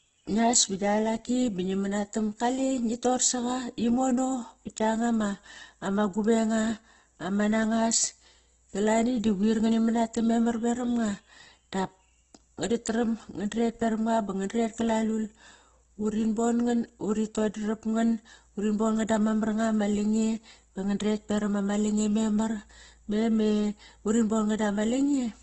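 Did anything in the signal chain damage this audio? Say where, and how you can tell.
Yes. Throughout, the speech sounds grainy and rough, with a noisy texture on voiced sounds and nothing above about 8.1 kHz. This points to the codec stage, likely heavy Opus compression in its CELT music mode, consistent with a very low bitrate around 12 kbps.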